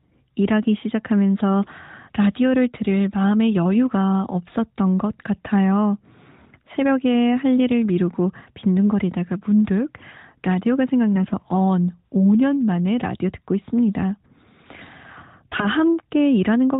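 From 15.50 to 15.67 s, near the end, the speech briefly turns hoarse, scratchy and gargly while keeping roughly its pitch and loudness. These are AMR bit errors. On a weak link, a few percent of the less protected bits in each frame arrived flipped, but the checksum on the critical bits still passed. The decoder then placed its excitation pulses wrongly and misread fine pitch, gain and spectral detail. The span fits about eight 20 ms frames of the narrowband AMR stream, whose 4 kHz ceiling and light coding character point to its top 12.2 kbps mode.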